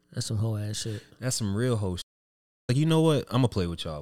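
A playback stall runs from 2.01 to 2.70 s: the speech cuts out mid-flow and the output goes silent for roughly 0.7 s before sound returns. The likely cause is the player running short of buffered data or its audio thread being blocked.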